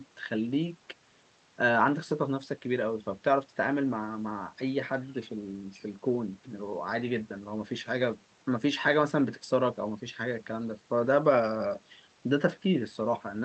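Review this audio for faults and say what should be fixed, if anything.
Nothing stood out on listening to this speech, so there is nothing here that needs fixing.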